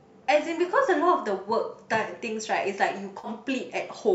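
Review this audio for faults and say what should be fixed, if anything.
AAC frame loss with concealment occurs at 0.66–0.69 s and 3.19–3.28 s. The decoder rebuilds the missing 20 and 50 ms from the last good spectrum, producing a smeared, phasey blur rather than a dropout's hard click or silence. Forward error correction or a larger jitter buffer on the transport would stop these frames from going missing.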